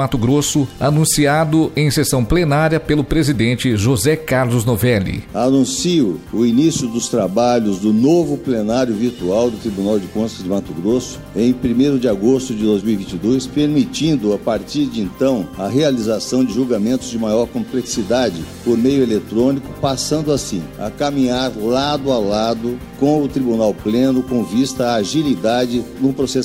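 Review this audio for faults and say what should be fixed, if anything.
Nothing here needs fixing; I listened all the way and didn't catch a single technical problem worth flagging.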